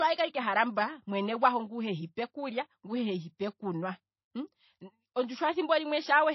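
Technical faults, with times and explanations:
Throughout: low-bitrate audio saved at a high bitrate. The speech has nothing above 5.8 kHz and carries low-rate MP3 smearing, which likely comes from a very low-bitrate MP3 encode later re-saved at a much higher rate; the second pass cannot restore the removed detail.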